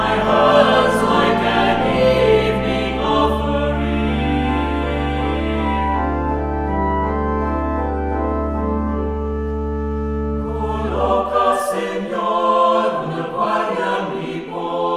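No technical faults are audible.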